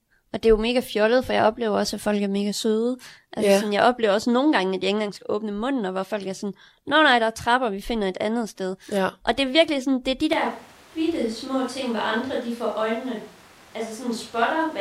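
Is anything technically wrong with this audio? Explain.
Yes, there's a switch to a distant microphone. At about 10.33 s the speech suddenly turns roomy and hollow, the low end thins out, and the level drops by something like 5 dB. Room noise also becomes more noticeable, sitting maybe 25 dB under the speech. It stays that way right to the end. The likely cause is that the close mic's feed dropped out and the recording fell back on a mic further from the talker, which picks up more room.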